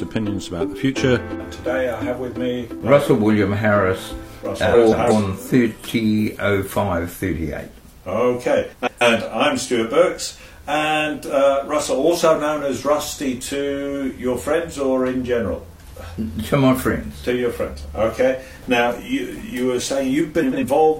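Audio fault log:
4.73–5.12 s, 8.72–9.02 s and 20.42–20.64 s: frames out of order. Two neighbouring blocks of about 186, 139 and 93 ms trade places, giving a garbled flutter. Unlike a dropout or skip, nothing is missing and later timing holds.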